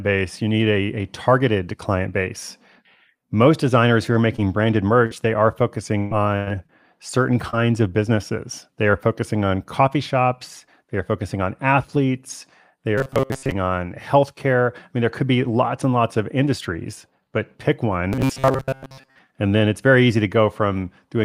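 A speech recording with choppy, metallic stretches from repeated packet loss between 4.13 and 7.55 s, after "designers who" and before "of businesses". Seven holes break up the sound there, the longest 124 ms, with about 320 ms missing in total. Each hole is bridged by extending the preceding audio, which creates the robotic, stuttering texture. Later the speech hardens into a rigid buzz at a steady 133 Hz, from 12.98 to 13.54 s (after "focusing on athletes they", before "on healthcare") and from 18.13 to 19.2 s (after "industries but pick one"). This robotic sound from repeated short buffers is likely caused by audio arriving too slowly, so a fragment of roughly 7.5 ms is looped in place of most of the real signal.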